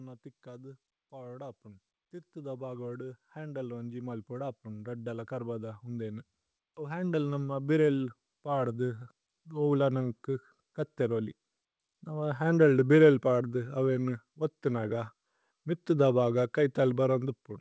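Speech with an automatic gain rising fault: from 0.43 s to 9.76 s the level climbs steadily by about 17 dB, voice and background noise swelling together as the gain control, finding the input too quiet, keeps raising its gain. The audio also passes through a call path with nothing above 8 kHz, which fits a wideband codec such as G.722.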